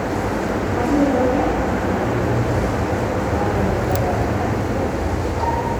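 No faults detected anywhere in the audio; nothing to report.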